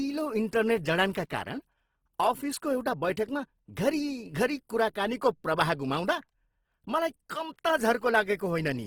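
Opus compression, likely, runs through the whole speech clip. In its CELT music mode the codec keeps each band's energy but fills starved bands with folded or noise content, so the speech sounds plainly rough and grainy, consistent with about 16 kbps, while the fullband range reaches 20.2 kHz.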